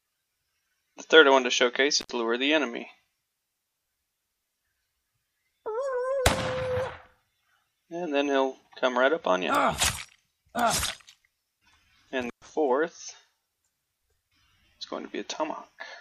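Intermittent contact at 1.99 s and again at 12.2 s: a loose plug or cable briefly opens, dropping the sound for about 81 ms, then 119 ms, with crackly edges.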